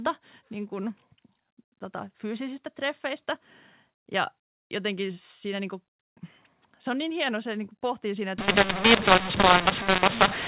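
From 8.38 s to the end at 10.47 s, just after "niin kuin pohtii siinä", mu-law and A-law are mixed up: mu-law telephone samples are expanded with the A-law curve, scrambling levels so speech turns harsh and distorted, and quiet gaps fill with noise, unlike the clean 4 kHz-limited G.711 telephone sound before it.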